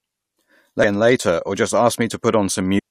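At 0.83 s and again from 2.75 to 2.80 s, damaged data in a compressed stream garbles the speech: the decoder misreads corrupted frames and resyncs on the next header, producing a brief glitch.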